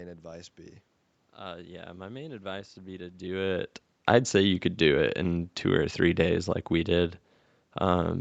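No technical faults are audible in this speech recording.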